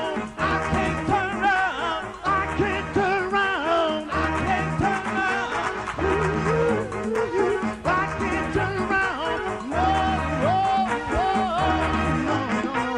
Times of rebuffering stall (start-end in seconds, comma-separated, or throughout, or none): none